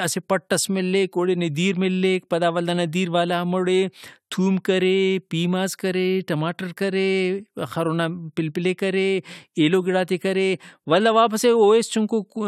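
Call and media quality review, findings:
Nothing stood out on listening to the call audio.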